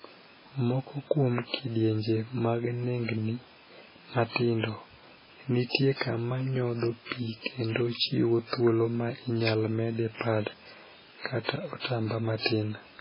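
From start to finish the speech carries heavy damage that points to MP3 compression, likely at a very low bitrate, which fits something near 16 kbps. Nothing survives above 5.3 kHz, so s sounds lose their hiss and the voice turns dull and watery, with swirly, chirping texture as weak frequency components flicker in and out. On a spectrogram this shows as a flat ceiling at 5.3 kHz with blank space above and patchy, dotted energy below.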